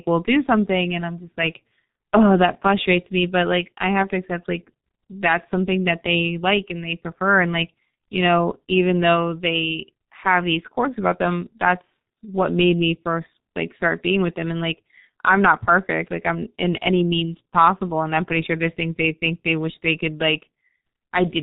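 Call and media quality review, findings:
G.723.1 codec, throughout the speech. Heavy codec damage: muffled, hoarse tone, nothing audible above 4 kHz, consonants smeared. The probable component is the telephony encoder. The band limit and the slow 30 ms frame updates to its voice model blur fast transitions, which fits the low-rate 6.3 kbit/s mode.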